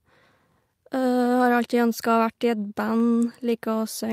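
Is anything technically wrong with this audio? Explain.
No, nothing technically wrong here.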